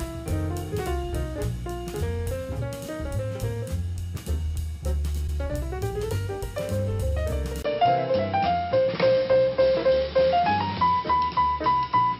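A short stutter at 5.27 to 5.37 s replays about 105 ms of audio once, which fits roughly four compressed frames: repeated frames, adding about 0.1 s. From 7.62 s to the end, after a 20 ms gap, the sound turns dull, with nothing above 5.5 kHz, a modest level shift and a new faint background hiss, likely the input switched to a poorer device.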